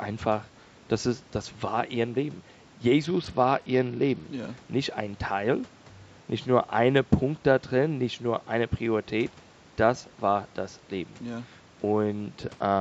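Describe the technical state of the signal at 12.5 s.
A Bluetooth SBC bit pool drop runs from 12.42 s to 12.80 s. Too few bits starve the upper sub-bands, dulling treble and adding grit, consistent with about 72 kbps.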